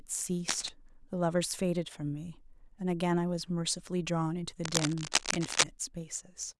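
Cable scratch noise appears at 0.48–0.69 s, a little below the speech, and again at 4.64–5.64 s, about as loud. A worn cable or connector being moved is likely.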